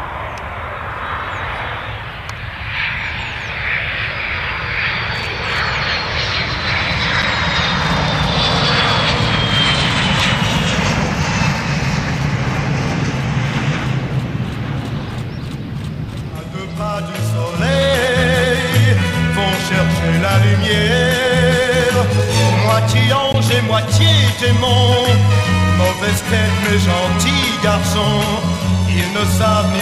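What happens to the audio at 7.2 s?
At 7.22 s the output buffer likely went unfilled in time and a 5.8 ms block of digital silence took its place, which fits a 256-sample block. The sound drops to silence and returns with no fade, so the brief gap is heard as a tick or dip.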